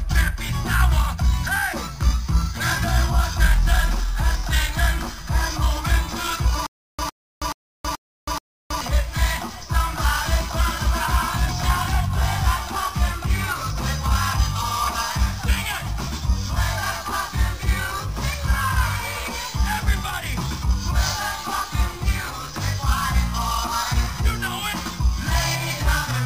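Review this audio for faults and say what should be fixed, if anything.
From 6.67 to 8.81 s there is stutter with silent gaps. A 108 ms fragment repeats five times, each followed by 321 ms of dead silence, every 429 ms. The playback likely stalled and kept retrying its last buffer. Audio from that stretch is lost. Larger playback buffering and a clean resend of the dropped segment would prevent it.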